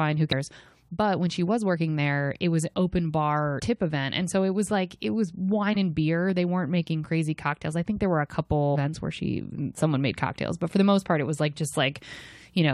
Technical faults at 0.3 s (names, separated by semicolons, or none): damaged data in a compressed stream